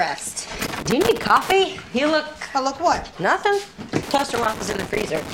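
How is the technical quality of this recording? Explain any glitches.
The recording is let down by loose connector crackle, which shows up twice: from 0.63 to 1.52 s, and again from 4.02 s right through to the end. What's happening is a worn or dirty contact somewhere in the chain making and breaking as it shifts, so the signal gets chopped on and off very fast, with pops where any DC on the line jumps. You hear it as ragged, irregular bursts of scratchy crackle over the sound.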